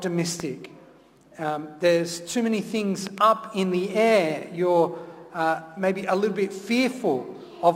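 Loud pops occur at 0.40–0.42 s (a single pop) and at 3.07–3.20 s (two in quick succession), each peaking roughly 10 dB above the sound, which continues underneath. They are likely voltage pulses from a plug, switch, static or driver glitch, shaped by downstream circuitry.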